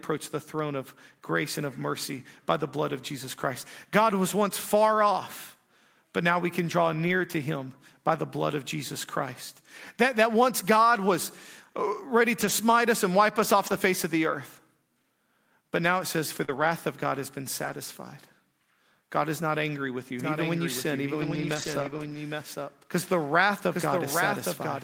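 A speech recording with three kinds of network and mixing trouble. The lost packets rebuilt from error correction show up as short rough, noisy patches where low-bitrate backup copies stood in for missing audio. They fall at 7.07 (between "now we can draw" and "to him by the"), 12.41–12.51, 13.67–13.77, 16.48–16.66 (just after "now it says for"), 17.64–17.74, and a longer 0.48 s stretch at 21.22–22.16. There's also a short concealed packet loss at 16.45–16.50, where about 40 ms never arrived and the decoder smeared the previous sound across the hole before the rebuilt frames took over. From 20.19 to the end, right after "is not angry with", you get a doubled audio track. A dry copy about 5 dB down trails roughly 0.7 s behind, likely a second, slower capture path mixed in.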